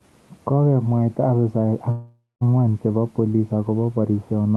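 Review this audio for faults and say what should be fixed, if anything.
From 1.91 to 2.43 s the speech stalls. The last sound drags on as a fading buzz, sinks into about 0.2 s of silence, then picks up exactly where it stopped, with nothing lost. This is likely a call audio freeze: delayed packets drained the jitter buffer, and the receiver padded roughly half a second until they arrived. A more stable network route or a deeper adaptive jitter buffer would prevent it.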